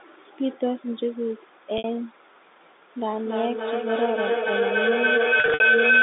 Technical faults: packet loss with pitch repetition; feedback howl

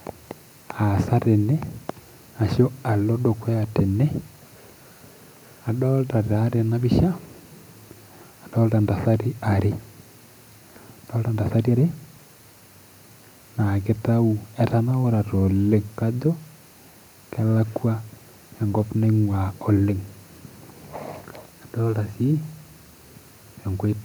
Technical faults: none

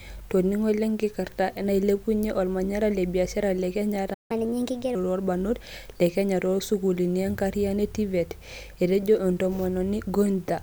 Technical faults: playback stall; catch-up at higher speed

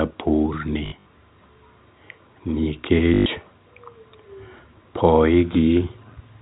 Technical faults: packet loss with last packet repeated

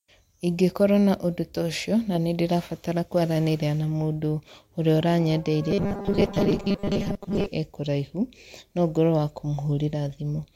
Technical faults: robotic sound from repeated short buffers

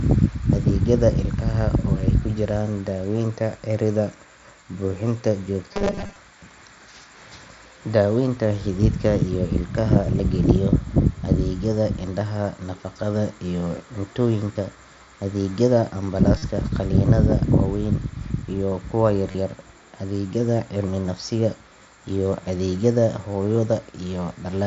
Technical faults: robotic sound from repeated short buffers; concealed Bluetooth headset packet loss

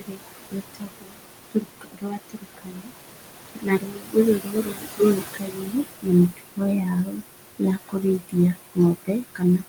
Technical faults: noise suppressor artifacts; speech cut by the noise suppressor

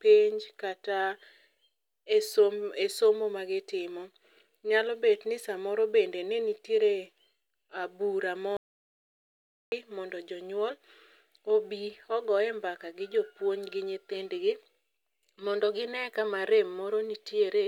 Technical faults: audio dropout to silence

